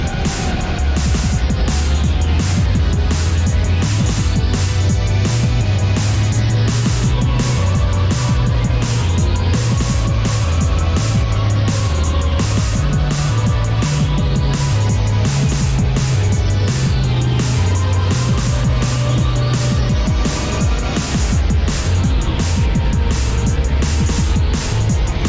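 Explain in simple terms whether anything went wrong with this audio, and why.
Nothing went wrong; no faults can be heard.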